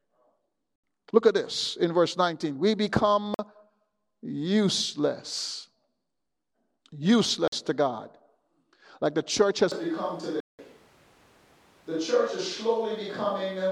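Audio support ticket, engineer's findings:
Block of digital silence at 0.76–0.84 s (78 ms), 3.34–3.39 s and 7.48–7.52 s (46 ms each), 10.40–10.59 s (186 ms). Hard cut to silence. Likely output buffer not filled in time. The 46 ms gaps fit a 2048-sample buffer; 10.4 s fits four.

Switch to a distant microphone from 9.72 s to the end. Sound turns roomy and hollow, thinner bass. Level drops roughly 5 dB. Room noise rises to around 30 dB under the speech. Likely cause: close mic signal lost, fallback to a far pickup.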